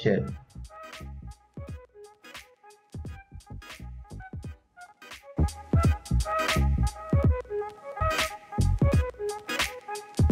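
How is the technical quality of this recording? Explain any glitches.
No glitches to explain; the recording holds steady throughout with nothing audibly going wrong.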